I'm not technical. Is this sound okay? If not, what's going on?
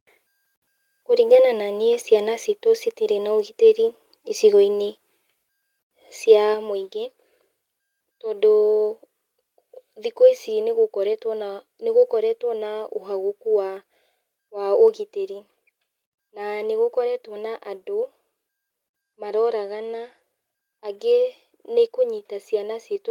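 No, there's a microphone volume stepped down problem. Just after "citirĩ na ũgitĩri icigoinĩ", at 5.43 s, the speech suddenly gets a bit quieter, then drops again, more noticeably, at 6.54 s. The call software likely turned the microphone input down in steps.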